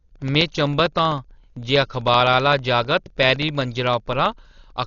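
The speech carries heavy damage from what is likely Dolby Digital compression at a low bitrate, around 40 kbps: nothing survives above 6.9 kHz, so it sounds dull, with rough, fluttering noise. Periodic USB or driver dropouts cut about a millisecond to silence every 64 ms from 0.09 to 4.77 s, producing roughly seventy evenly spaced ticks.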